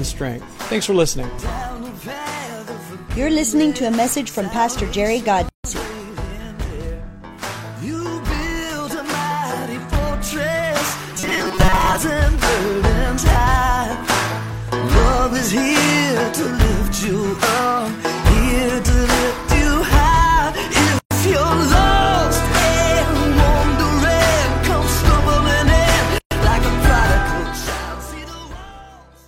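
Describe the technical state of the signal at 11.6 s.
At 11.6 s the signal carries robotic sound from repeated short buffers, running from 11.15 to 11.98 s. The sound turns into a rigid, metallic buzz at 188 Hz. The likely cause is audio arriving too seldom, so a fragment of about 5.3 ms is looped to fill the gaps. About half of this stretch is repeated material, and the real audio in those moments is skipped. The loop length sets the fixed buzz pitch.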